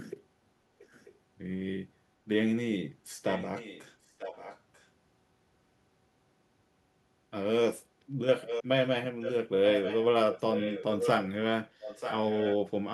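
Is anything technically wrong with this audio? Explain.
Yes, there's echo leak: a faint-to-strong delayed copy of the speech, about 940 ms late, surfaces at 0.79, 3.27, 4.05, 8.4, 9.21, 9.67, 10.32 and 11.81 s. It's likely a far-end loudspeaker echo the canceller didn't fully remove, and it gets louder later in the clip.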